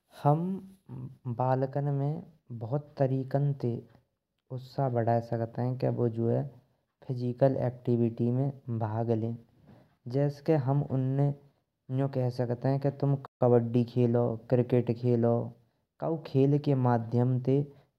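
At 13.26 s the player most likely ran short of buffered data, or its output thread was held up, so nothing reached the output until 13.41 s. That is a playback stall of about 145 ms. The speech cuts off abruptly in mid-flow and the gap is plain silence, long enough to register as a hiccup before the audio picks up again.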